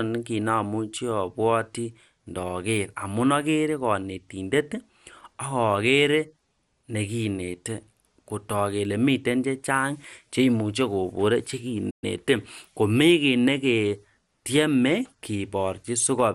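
Throughout the speech there is MP2 compression damage: a dull, gurgling graininess as upper sub-bands flicker on and off and the surviving bands are coarsely quantised, most likely from MPEG Layer II coding at a low bitrate, around 80 kbps. A spectrogram shows patchy, blocky high bands and nothing above 17.3 kHz.

At 11.9 s, right after "miten chechang cheimuche kekon", a playback stall cuts the sound off mid-flow for about 120 ms, likely because the player ran short of data or was blocked. The waveform drops to a flat line, and the spectrogram shows a clean vertical gap.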